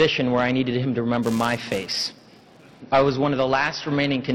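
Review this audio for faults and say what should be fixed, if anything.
From 1.23 s to 2.80 s there is a buzz at 375 Hz. It comes from a filter restarted on every block. The filter loses its state and starts each block from silence, leaving a tick each time. The rate fits a 128-sample block at 48 kHz. The buzz follows the sound's level. To prevent it, keep the filter's state between blocks instead of resetting it.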